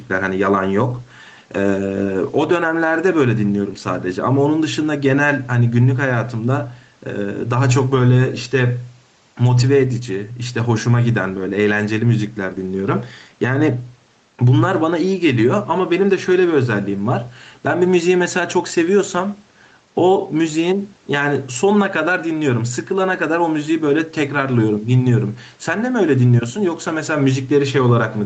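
From the start and through the whole speech clip, the level pumps, a swing of a few decibels that keeps the level breathing and squashes loud and soft passages closer together. This is gain pumping, likely caused by the input gain being set far too high, so a fast limiter or compressor keeps clamping down on every peak and releasing in the gaps.

Between 0.91 and 5.49 s the speech turns rough and watery, with a grainier, more smeared texture than the rest of the clip. The worst stretch lasts about 3.5 s. This is a call bitrate drop. The call's bandwidth estimate fell and the Opus encoder was pushed to spend far fewer bits, which fits a fall from around 32 kbps to roughly 18 kbps. The coarser coding then recovers by 5.49 s. The 8 kHz top end of the call path is heard across the whole clip.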